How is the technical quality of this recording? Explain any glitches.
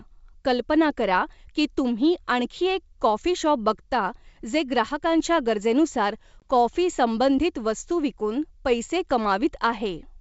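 There is one glitch, heard against G.722 wideband coding at 64 kbit/s. Packet loss on an ADPCM call occurs at 6.40 to 6.46 s: a hard-edged gap of about 20 ms, roughly one packet, drops out. The decoder's adaptive predictor and step size lose sync with the sender's, so the speech resumes slightly distorted before settling within tens of milliseconds.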